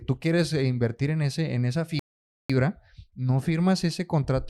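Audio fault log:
1.99–2.50 s, rebuffering stall: the player's buffer ran dry and playback halted until more data arrived, so right after "en ese en esa" the speech drops to silence for about half a second, then picks up exactly where it stopped, nothing missing, just 0.50 s of added time.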